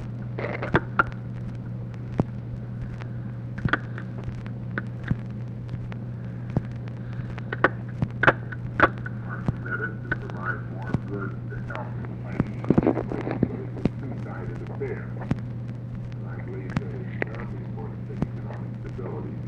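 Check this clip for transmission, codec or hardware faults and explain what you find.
No transmission, codec or hardware faults can be heard anywhere in the signal.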